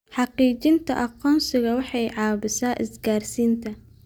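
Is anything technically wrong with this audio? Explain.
No, nothing is technically wrong with this audio.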